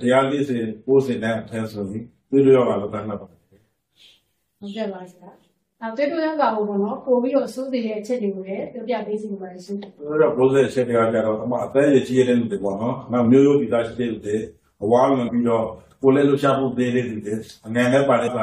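Two short blips at 15.27–15.29 s and 18.26–18.29 s point to damaged data in a compressed stream, where the decoder loses sync on corrupted frames.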